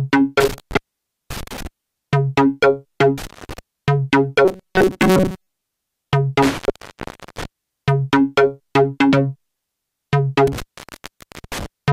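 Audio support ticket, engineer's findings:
Cut-outs with crackle at each edge, faint hiss during the gaps: 0.40–1.67 s (open about 0.53 s), 3.18–3.59 s (0.25 s), 6.43–7.45 s (0.80 s), 10.47–11.66 s (0.90 s). Intermittent contact: loose cable or plug briefly opening the signal line.

Rigid metallic buzz at 188 Hz, 4.45–5.47 s, with most of the audio replaced. Robotic sound from repeated short buffers, likely from data arriving too slowly, so a roughly 5.3 ms chunk is replayed in place of skipped audio.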